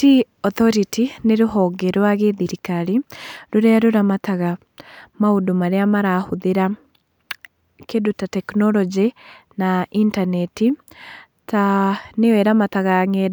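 Speech recording; no technical faults audible anywhere in the clip.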